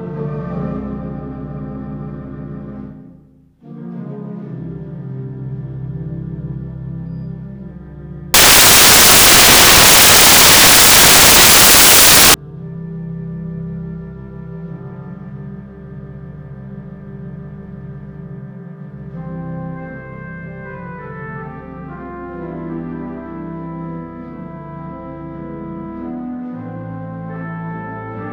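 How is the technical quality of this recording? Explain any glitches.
From 8.34 to 12.34 s the sound gives way to loud, harsh broadband noise for four seconds. These are samples built from the wrong bytes: misaligned or swapped byte order turns each sample's rapidly changing low bits into its dominant part.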